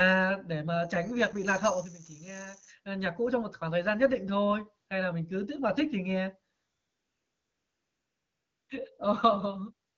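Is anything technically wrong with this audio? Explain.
Yes. From 0.71 to 2.73 s there is loudspeaker feedback squeal: a microphone picked up the loudspeaker it was driving, and the loop's gain passed unity at 6.4 kHz. That tone builds over about a second into a shrill whistle, peaking at a few dB above the speech, and it stops just before "ơ nhạc cũ trong".

There is also AMR comfort noise. After "mà thích thì nghe", from 6.55 to 8.69 s, and again briefly from 9.89 s to the end, the phone judged the talker silent and stopped sending speech frames. The receiver filled those gaps with smooth synthetic noise, so the real background drops out and a flat hiss switches in. The speech itself carries the light colouring of the AMR wideband (HD Voice) codec, which fits a 12.65 kbit/s mode.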